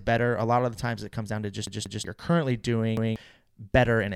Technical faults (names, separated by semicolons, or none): repeated buffer